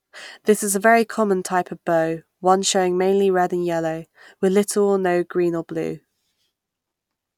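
No technical faults can be heard anywhere in the speech recording.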